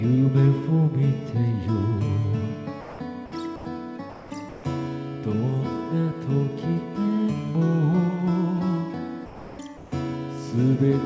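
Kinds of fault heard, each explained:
Sound dropped by the voice detector: Five times the audio gives way to a steady, featureless hiss and then snaps back, at 2.81, 3.26, 3.56, 4.49 and 9.26 s. They last from about 60 ms up to a third of a second, the longest being the one at 9.26 s. It's likely the sender's voice detector mistaking real sound for background and going quiet, so the receiver fills the gap with generated noise until the detector triggers again.
Comfort noise in place of the background: Twice, at 4.10 s for about 210 ms and at 9.77 s for about 150 ms, the real background (sitting well down, about 19 and 26 dB below the loud parts) drops out and a flat, texture-free noise stands in. The first fill is about 3 dB quieter, so you hear a dip. The second matches the level and only gives itself away by losing detail. This is likely the sender pausing transmission while the receiver synthesises filler.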